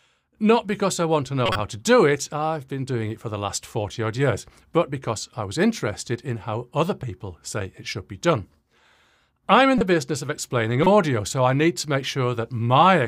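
At 1.46 to 1.60 s, a corrupt frame decoded fault spans several frames. Flipped bits made the decoder place energy at wrong frequencies, giving a noisy burst. Single-frame blips follow at 9.78 to 9.81 s and 10.83 to 10.87 s. The errors peak around -10 dBFS, the last nearer -5 dBFS.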